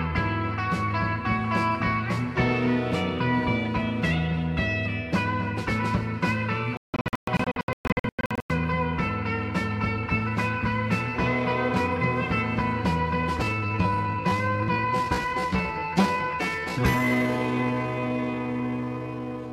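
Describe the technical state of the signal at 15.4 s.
At 15.4 s the signal sits inside a time-stretched section running from 13.38 s to the end at 19.52 s. The likely cause is software stretching the passage to fill a set length, slowing it to about 0.63 times its original pace while holding pitch steady by repeating short overlapping slices. The pace drops abruptly at 13.38 s with no change in pitch, and the audio drags from there on.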